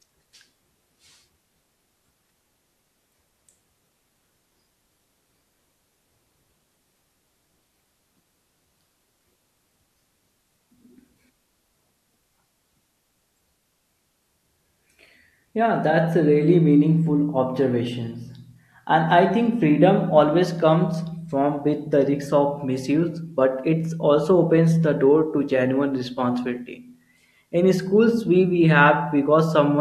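Nothing stood out as a technical fault on listening to this speech recording.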